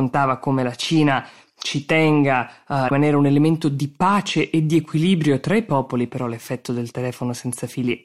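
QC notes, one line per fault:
2.86–2.92 s, damaged data in a compressed stream: a brief glitch of about 56 ms just before "un elemento di pace", where corrupted frames threw the decoder out of sync until it found a valid header. On a spectrogram it shows as a short disruption breaking the speech harmonics; on the waveform, an abrupt discontinuity.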